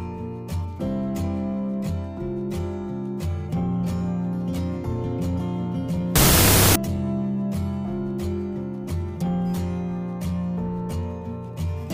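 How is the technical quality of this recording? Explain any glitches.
The recording has one clear fault, a wrong sample width, from 6.16 to 6.76 s. Audio written as 16-bit integers was read back as unsigned 8-bit, so each original sample was split into two separate values. Only the high bytes still track the real waveform, while the low bytes contribute essentially random numbers. The result is a burst of loud, harsh noise with the original sound buried inside it. Because each sample became two, that stretch plays at half speed, an octave lower than it should be.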